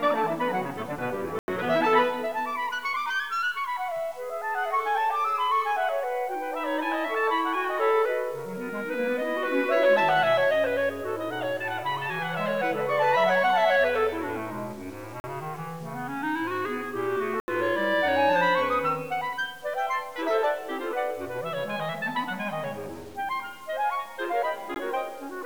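Throughout, a grainy, gritty distortion rides with the sound at roughly 30 dB below it, likely low bit depth without dither, fitting about 7 bits; unlike steady hiss, it tracks the signal. Blocks of digital silence cut in hard at 1.39 s for about 90 ms, 15.2 s for 40 ms, 17.4 s for 80 ms, and 24.74 s for about 16 ms. Each is an abrupt zeroed stretch, not a faded dropout.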